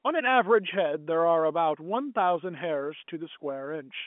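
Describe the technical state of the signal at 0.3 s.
At 0.3 s the signal is intact, with no fault present, only the narrow band of G.711 telephone coding, which passes nothing above about 3.7 kHz.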